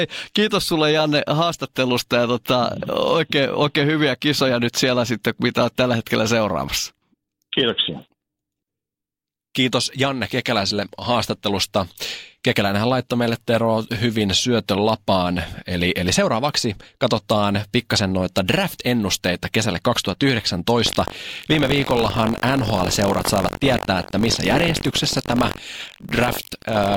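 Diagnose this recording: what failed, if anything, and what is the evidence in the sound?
Buffer tearing at the driver/buffer stage: from 20.84 s to the end, the speech picks up a robotic rattle at 46.9 Hz, which fits a 1024-sample buffer. Writer and reader have slipped, so a small slice of each period replays audio roughly a tenth of a second old, with hard joins.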